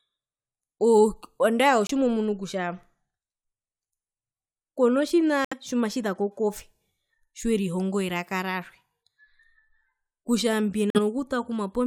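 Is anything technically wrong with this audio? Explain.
Yes. Corrupt frames were muted at 1.87–1.91 s, 5.45–5.54 s and 10.90–10.99 s: the decoder rejected damaged compressed frames and substituted silence. Each gap starts abruptly, the first sounding like one frame and the others like about three, yet the timing never shifts, which sets this apart from skips or dropped audio.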